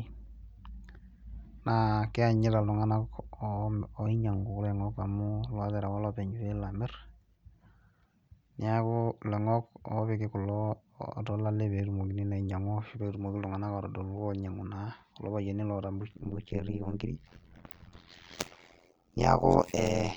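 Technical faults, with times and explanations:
16.13 to 20.16 s, overlap-add ripple: the speech gets chopped into frames that are stitched back with an overlap that doesn't sum evenly, so the level dips by about 60 dB once per frame, around 100 times a second, giving a harsh, buzzy robotic flutter.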